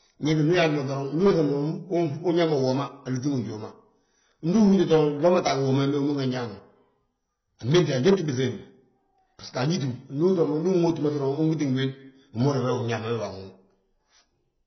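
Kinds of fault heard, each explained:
AAC compression, throughout: the speech sounds dull and smeared, with nothing above 6 kHz and a heavy warbling, fizzy texture on sustained vowels and sibilants. The likely cause is AAC-LC coding at a very low bitrate, around 16 kbps, where coarse quantisation leaves holes in the spectrum.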